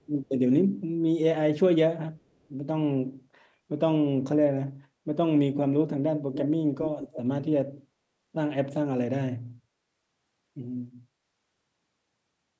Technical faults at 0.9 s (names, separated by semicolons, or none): none